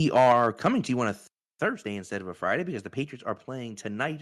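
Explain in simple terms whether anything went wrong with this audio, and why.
Two things went wrong right at the start. From 0.16 to 0.67 s, just before "to you on a", the loudest bits sound harsh and crackly. That's microphone overload: the mic was likely set too hot, so the peaks hit the ceiling and got their tops sliced off.

At 0.32 s, in the middle of that distorted stretch, the voice and the background both drop in loudness at once. That's the microphone volume being stepped down, likely the call software reacting to the overload and pulling the mic level down in one quick step.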